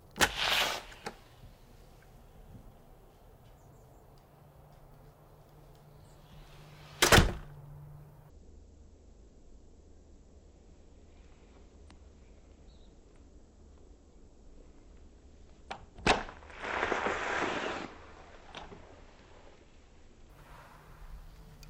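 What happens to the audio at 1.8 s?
Nothing goes wrong at 1.8 s; the sound plays through that moment intact, with no dropout, click or other fault.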